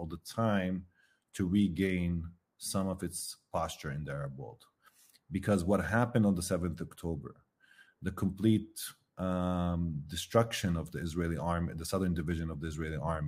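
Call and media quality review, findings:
No audible faults found.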